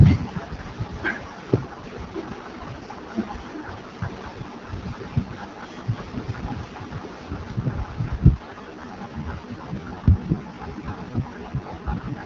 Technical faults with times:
0.00-12.26 AMR wideband (HD Voice) codec
8.28-12.26 time-stretched section

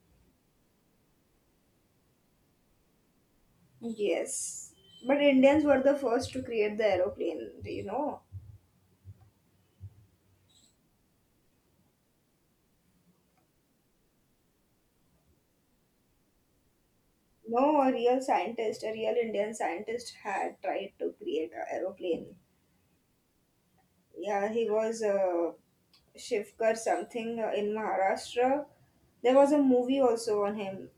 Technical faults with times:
none

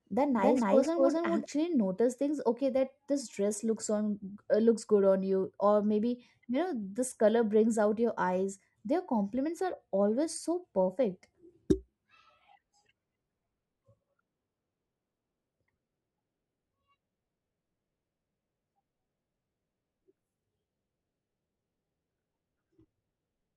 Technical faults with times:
0.00-1.46 doubled audio track

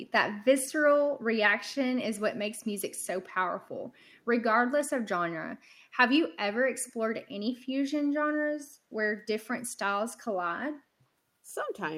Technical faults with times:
2.97-3.07 echo leak
3.93-4.20 echo leak
6.83-6.93 echo leak

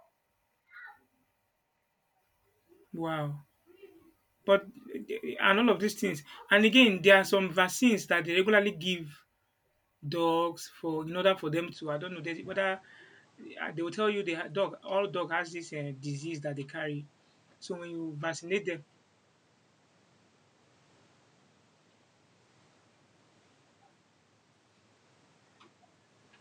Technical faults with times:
11.73-26.40 input switched to a poorer device

